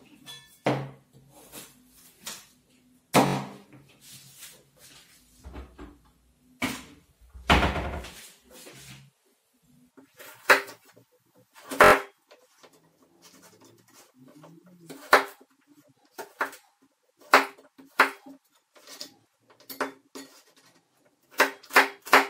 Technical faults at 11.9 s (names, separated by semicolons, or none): repeated buffer